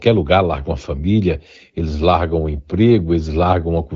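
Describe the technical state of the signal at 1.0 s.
At 1.0 s the audio is intact, with no fault present, only the wideband HD Voice coding whose band-limited top end is part of its normal sound.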